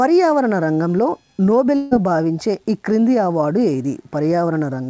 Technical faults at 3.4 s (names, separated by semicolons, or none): none